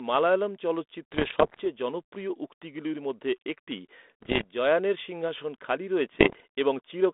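Pops and short rough, crackly bursts with brief jumps in level break into the speech from 1.12 to 1.61 s, 4.22 to 4.45 s and 6.20 to 6.40 s. These are bit errors on an ADPCM link, at roughly one to two percent of bits. Each flipped bit throws off the decoder's step size and prediction, so the damage rings on for a few milliseconds. The narrow telephone band heard throughout fits a 32 kbit/s G.726 stream.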